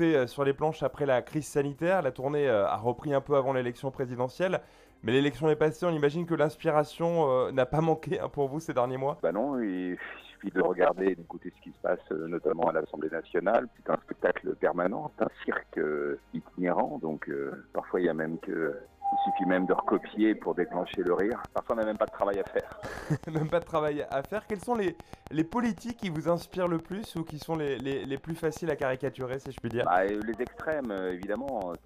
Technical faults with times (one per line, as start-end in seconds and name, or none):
20.94-31.76 train of clicks